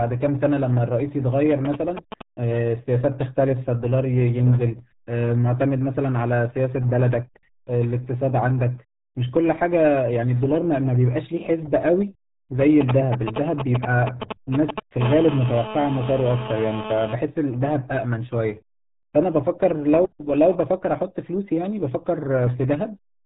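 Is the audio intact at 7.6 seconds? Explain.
No. At 7.6 seconds the speech carries the RealAudio 14.4 codec fault, which runs through the whole clip. This early dial-up speech codec squeezes the signal into a tiny bit budget, which here fits about 8 kbit/s. It discards everything above 3.8 kHz and coarsely re-models what remains. At that moment the voice sounds muffled and boxy, with a gargly, watery roughness. The heavy coding damage smears consonants and the natural texture of the voice.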